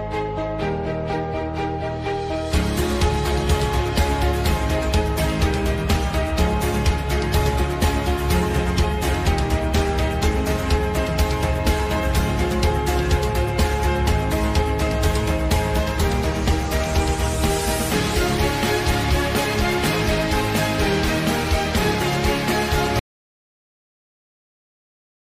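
At 23.00 s the audio cuts off abruptly into silence, with no room tone, through to the end: an audio dropout to silence, likely from a lost input.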